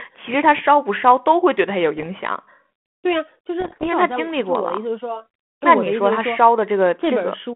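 Bit errors on an ADPCM link strike twice in this speech. The first runs from 1.97 to 2.12 s, and the second, longer and denser burst runs from 3.61 to 3.88 s at roughly double the error rate. Each flipped bit knocks the decoder's step size and predictor off track, so the damage rings on briefly as pops and rough, grating bursts with sudden level jumps. Both bursts sit within a 150 Hz to 3.4 kHz telephone band consistent with 32 kbit/s G.726.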